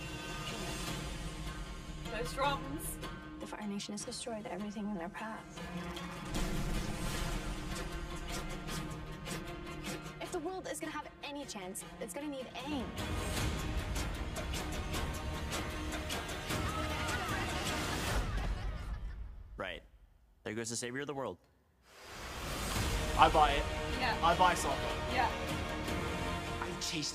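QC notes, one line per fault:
0.00–12.71 s: channel delay (comb filtering). One channel trails the other by roughly 5 ms, and when they combine the shared content cancels at regularly spaced frequencies from around 100 Hz upward, leaving fixed notches that make the sound hollow and phasey.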